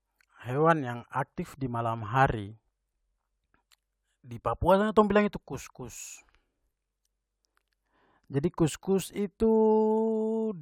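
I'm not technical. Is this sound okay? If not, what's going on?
Yes, this sound is okay; nothing is going on that needs fixing.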